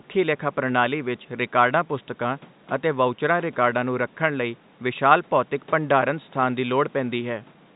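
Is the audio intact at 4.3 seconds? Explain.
Yes, at 4.3 seconds the audio is intact, with only the faint room noise and the narrow telephone band of G.711 coding audible.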